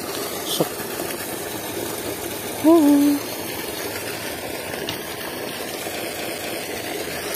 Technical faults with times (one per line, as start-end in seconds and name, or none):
6.13-6.63 CD stuck on one turn